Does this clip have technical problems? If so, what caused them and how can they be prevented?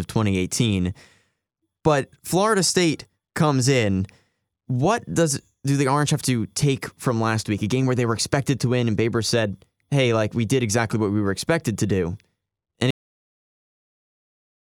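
Yes: a cut-off end at 12.91 s. The speech stops mid-sound and drops straight to digital silence, with no decay or trailing room tone as in a fade-out or a natural pause, because the final buffers were never written. Prevent it by flushing and closing the recording properly before stopping.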